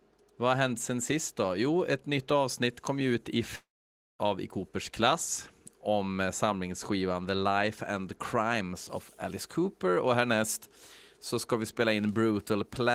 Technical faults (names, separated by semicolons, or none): long network dropout